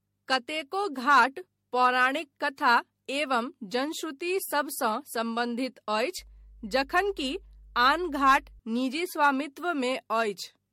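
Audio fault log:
throughout: generation loss. The sound is swirly, smeared and hollow, with blurred attacks and nothing above 16.5 kHz. The damage goes beyond one low-rate pass and likely comes from about five MP3 re-encodes near 65 kbit/s, each requantising on a shifted frame grid so noise and spectral holes accumulate.
6.19–8.60 s: mains hum. A steady low 50 Hz tone sits about 25 dB below the signal for roughly two and a half seconds. Power-line current is coupling into the signal path, through a ground loop or a nearby transformer.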